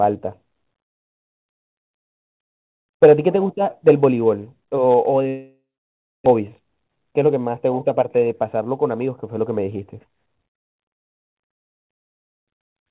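It's a speech clip carried over a call path that cuts everything above 4 kHz, as you'd expect from G.711 mu-law. From 5.28 to 6.28 s the sound stalls. The last bit gets stretched into a fading buzz, then about 0.61 s of silence, and when audio resumes roughly 0.6 s of speech is simply gone. That's likely a long network dropout. Right after, from 6.32 to 8.44 s, there's a jitter buffer speed-up. The speech runs at 116% speed with unchanged pitch and sounds hurried, as the receiver trims short pitch-period chunks to shed about a third of a second of built-up delay.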